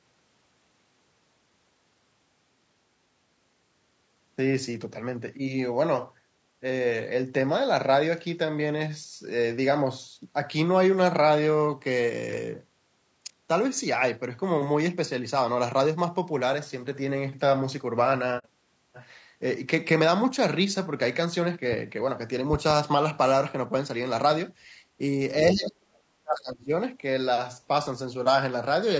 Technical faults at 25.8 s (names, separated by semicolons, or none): low-delay AAC compression; speech suppressed in double talk